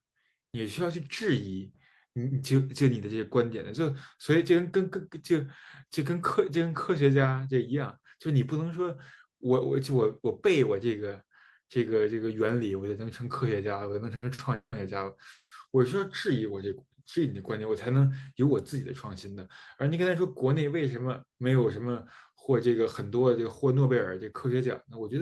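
Short stalls from a late packet come at 14.15 to 14.24 s and 14.34 to 14.40 s. Each time a packet missed its slot and the jitter buffer emptied, so the last sound is held for about 70 ms, then 40 ms, with a faint buzz before the speech resumes intact.

Call audio freezes follow at 14.54 to 14.74 s and 15.32 to 15.53 s. A held sound fades into silence, about 90 ms and then 70 ms of it, before speech picks up where it stopped, having gained roughly 180 ms and 190 ms. The likely cause is packets held up in transit that drained the jitter buffer.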